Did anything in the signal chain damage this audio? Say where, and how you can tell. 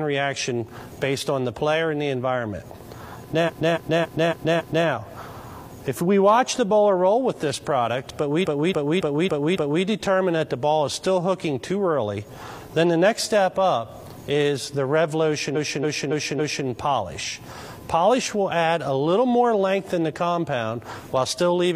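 Yes. Repeated frames at 3.44–4.83 s, 8.41–9.80 s and 15.51–16.63 s: the same 278.6 ms stretch plays five, five, then four extra times, a stutter adding 1.39, 1.39 and 1.11 s. Compressed frames were written or sent more than once, and the decoder replayed them.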